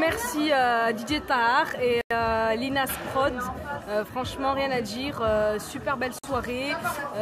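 The audio drops to silence twice, from 2.01 to 2.11 s (about 94 ms) and from 6.19 to 6.24 s (about 49 ms), then resumes. These gaps are likely Bluetooth stalls, where the receiving buffer emptied while held-up packets were resent, leaving flat-line gaps in the waveform and blank vertical bands across the spectrogram.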